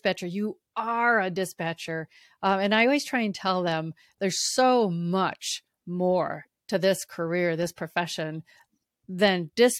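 Speech recording with no audible technical faults.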